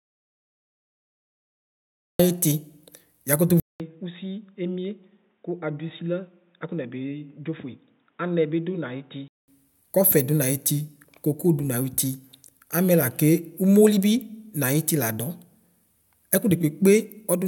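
A speech recording. It opens in an audio dropout to silence: silence until 2.2 s, with no room tone, likely from a lost input link. At 3.6 s, after a 200 ms gap, the input switches to a poorer device, likely a headset or second microphone. The sound turns dull, nothing above 3.8 kHz, roughly 10 dB quieter, with faint new background noise. It clears at 9.48 s.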